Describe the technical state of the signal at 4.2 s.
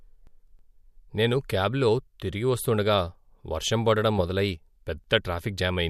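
At 4.18 to 4.21 s the speech carries a corrupt frame decoded. Damaged bits in the compressed stream were played as if valid, so energy lands at wrong frequencies. The result is a short chirp, squeak, blip or burst of noise, with an error peak around -20 dBFS, lasting about two codec frames.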